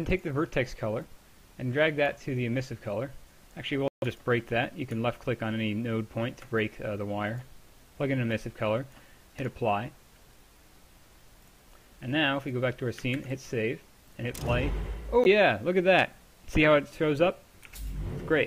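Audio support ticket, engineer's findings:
Bluetooth stall, likely from interference delaying packets until the headphone buffer ran empty. Playback drops to silence at 3.88–4.04 s (about 140 ms) and again at 15.24 s (14 ms), resuming after each gap once retransmitted audio arrives.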